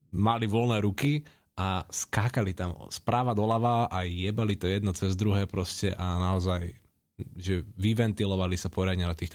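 No technical faults are audible.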